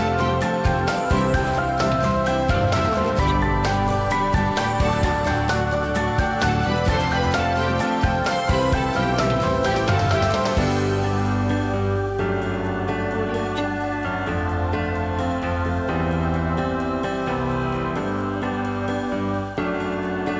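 No technical faults can be heard anywhere.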